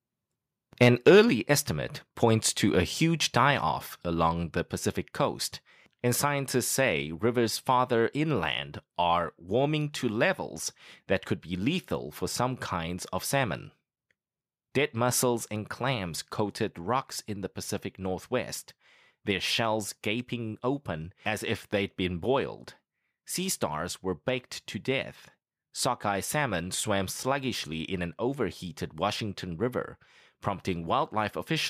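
From 0.81 to 1.2 s the speech crackles harshly, peaks flattened roughly 4 dB past full scale on a few percent of samples: likely microphone overload. At 1.3 s, just before "estimate points to a", the level drops about 5 dB, then about 3 dB more at 3.51 s between "points to a huge" and "off along the". That's likely the microphone volume stepped down automatically.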